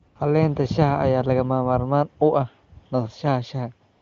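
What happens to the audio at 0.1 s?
From 0.07 to 0.15 s, an 80 ms stretch, the phone judged the talker silent and stopped sending speech frames, so the receiver filled the gap with AMR comfort noise built from a rough estimate of the background's level and spectrum. For that moment the real background gives way to a smooth, steady synthetic hiss that switches in and then out again.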